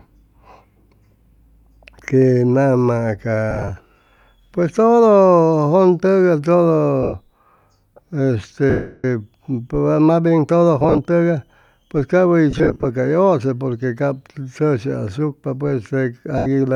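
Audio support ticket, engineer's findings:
Lost LE Audio frames on the Bluetooth link at 3.51–3.71 s (scattered), 7.03–7.14 s, 8.70–9.05 s, 10.80–10.99 s before "tʉgay pues cap", 12.51–12.85 s (scattered) and 16.38–16.47 s. LC3 concealment repeats the last spectrum with random phase, so speech smears into noise. The 340 ms gap fades toward silence.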